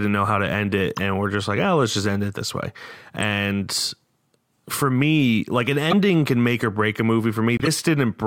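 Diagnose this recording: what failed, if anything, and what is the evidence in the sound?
Brief chirps and noise bursts cut through the speech at 0.95–0.99, 3.21–3.23, 4.48–4.57, 5.90–5.93 and 7.57–7.67 s. The one near 5.9 s is loudest and the one near 4.5 s is faint. This is a corrupt frame decoded at the codec stage: bit-damaged compressed frames were played anyway, putting energy at the wrong frequencies.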